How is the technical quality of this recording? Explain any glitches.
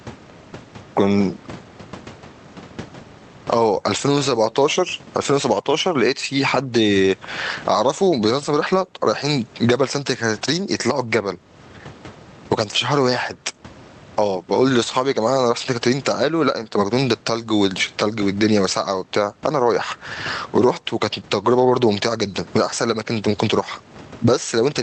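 The recording has one fault, gain pumping, running throughout the speech. The microphone gain was likely set far too high, so a fast limiter repeatedly clamps it, swinging the level by roughly 20 dB. The room noise sits about 36 dB below the speech, and the speech is left flattened and squashed. The call path's band limit of 8 kHz, consistent with Opus at around 32 kbps, can be heard as dull treble.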